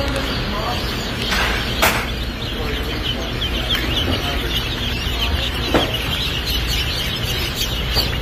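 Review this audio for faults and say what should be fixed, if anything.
Nothing in this audio needs fixing. No fault can be heard at any point, so no change is called for.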